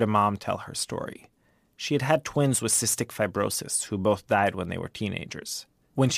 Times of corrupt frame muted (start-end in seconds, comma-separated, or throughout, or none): none